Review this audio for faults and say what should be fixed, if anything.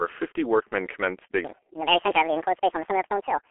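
Throughout, the speech sounds muffled, hoarse and boxy, with smeared consonants and nothing above 3.6 kHz. The telephone band of roughly 300 Hz to 3.4 kHz and the heavy damage point to the G.723.1 codec at about 6 kbit/s. Its 30 ms frames and slowly updated voice model blur fast detail. To prevent this, record or route the audio through a wideband codec at a higher bitrate rather than this narrowband telephony codec.

From 1.45 s to the end at 3.50 s, the speech suddenly turns high and hurried. It plays about 1.8 times too fast, and pitch rises by close to ten semitones. This section at the wrong speed likely comes from playback or editing against a mismatched clock, which shifts speed and pitch together. To prevent it, make sure every stage of editing and playback uses the same sample-rate clock as the recording.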